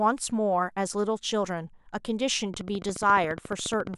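Something in the signal chain, likely electrical interference from nearby equipment or a faulty connection or power supply, starts injecting short pulses at 2.54 s and keeps it up until 3.95 s, near the end of the speech. The result is a train of clicks: about twenty near-identical ticks at a steady 14.3 per second, a regular rattle that sits on top of the speech and carries through any pauses, with the loudest clicks peaking a few decibels above the speech itself.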